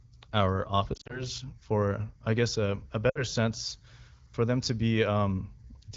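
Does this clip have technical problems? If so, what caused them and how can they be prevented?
Yes. There are lost AMR speech frames at 0.93 to 1.24 s, just before "for I guess a", where about 100 ms of audio is lost in short runs of up to 40 ms spread over 160 ms. There is another at 3.10 to 3.24 s, between "I guess a a" and "sense for them to", with about 60 ms lost. Radio errors corrupted these frames, so the AMR-WB decoder (15.85 kbit/s, light coding damage) repeated its last good parameters with falling gain. The result is brief warbles and dips before the speech recovers. Better radio link margin, or switching to a more robust codec mode under poor coverage, would prevent this.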